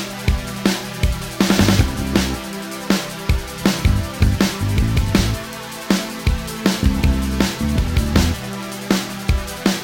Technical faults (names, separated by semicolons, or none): sample clock jitter